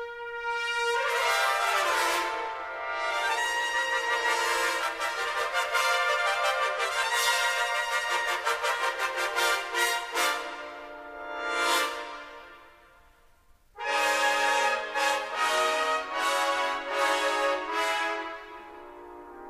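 No technical faults can be heard anywhere in the audio.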